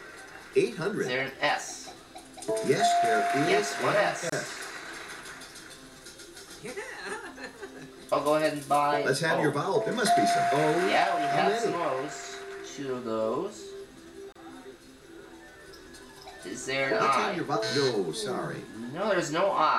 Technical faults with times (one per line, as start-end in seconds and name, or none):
4.29-4.32 gap at a join of encoded pieces
14.32-14.35 gap at a join of encoded pieces